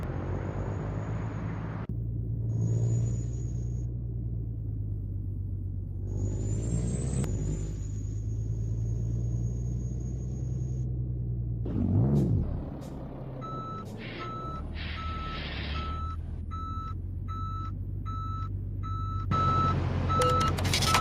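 No technical faults can be heard anywhere in the audio. There is no point in the clip where a problem stands out.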